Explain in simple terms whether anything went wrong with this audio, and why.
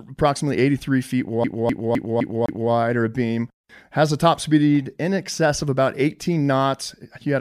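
From 1.44 to 2.71 s the speech gets a CD stuck on one turn, replaying the same quarter-second chunk five times, stuttering before "or a beam".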